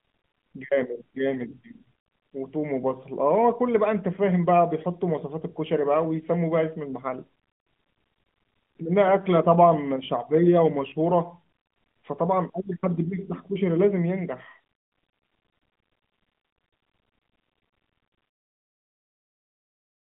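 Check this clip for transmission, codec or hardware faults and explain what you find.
No transmission, codec or hardware faults are present in this speech clip.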